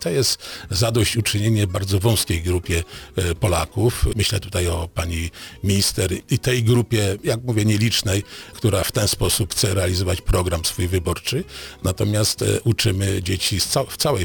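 Crude rate conversion runs throughout: the sound was stretched, likely from 32 kHz to 44.1 kHz, by repeating nearest samples without filtering. This adds a gritty, inharmonic fizz roughly 15 dB below the signal, visible as mirrored, unrelated lines on a spectrogram and tiny stair-steps in the waveform.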